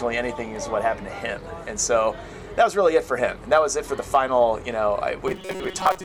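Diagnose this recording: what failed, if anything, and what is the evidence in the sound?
From 5.27 s to the end of the clip, the sound turns into a rigid, metallic buzz with a fixed pitch of 188 Hz. The buzz still follows the sound's rough contour. This is robotic sound from repeated short buffers, likely at the driver or buffer stage. New audio arrived too slowly, so the software looped a chunk of about 5.3 ms, one cycle of 188 Hz. Roughly half of the output in this stretch is repeated material, and the real audio underneath was skipped.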